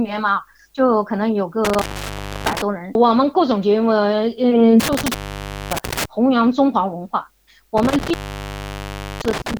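Intermittent contact breaks the audio three times, at 1.65–2.62 s, 4.80–6.05 s and 7.77–9.57 s, opening for 0.64, 0.57 and 1.06 s. A loose plug or cable leaves crackling edges and faint hiss, unlike a clean digital dropout.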